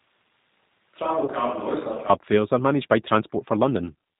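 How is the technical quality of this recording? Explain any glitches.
Quality is poor: narrowband codec damage throughout, a distant-sounding first half, and one brief concealment glitch.

The whole clip carries G.729 codec damage at 8 kbit/s. Nothing above 4 kHz survives, and the pulse-based resynthesis leaves speech rough and synthetic, unlike a plain low-pass filter, which would dull speech without adding that roughness.

From the start to 2.1 s, the sound is roomy, hollow and bass-light, about 10 dB quieter, with room noise about 35 dB below the speech. That points to a likely switch to a distant microphone. Reverberation and hollowness set it apart from a simple gain drop, and it ends abruptly at 2.1 s.

At 1.25 to 1.30 s comes VoIP packet loss concealed by the speech codec. About 30 ms of audio, fitting a single lost packet, was replaced by a fading extrapolation of the preceding speech. 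A raw dropout would give silence or a click, not this fading fill.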